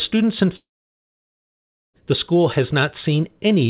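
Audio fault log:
0.56–1.96 s, long network dropout: sound trails off into a short fading buzz, then about 1.3 s of silence until "the school". Likely lost packets, briefly concealed, then muted.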